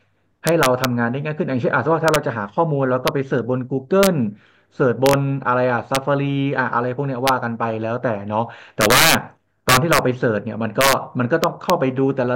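Integer overflow runs throughout this speech clip: the signal is driven about 5 dB past full scale, and instead of being limited, each peak that exceeds the integer ceiling wraps around to the opposite extreme. Only a small fraction of samples cross that limit, but every one jumps across the full range, so the loudest moments of speech erupt in violent cracks far sharper and harsher than ordinary clipping.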